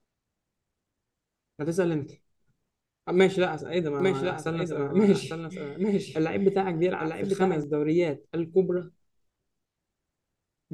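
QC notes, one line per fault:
4.00–7.64 s, doubled audio track: the speech is joined by a second, full-band copy of itself trailing about a second behind and a few decibels quieter, with no reverb tail or room colour, switching in abruptly at 4.00 s and cutting off just as abruptly at 7.64 s. The dry, fixed-offset copy likely comes from the same signal being captured again through a slower path, or an edit leaving two misaligned copies.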